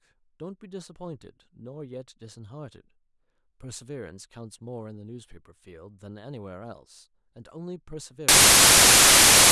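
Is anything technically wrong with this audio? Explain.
Yes. From 8.29 s to the end at 9.51 s, the speech turns into loud broadband noise: samples built from the wrong bytes. The reader misassembles each sample, so the rapidly changing low-order bits dominate the values, producing harsh broadband hiss.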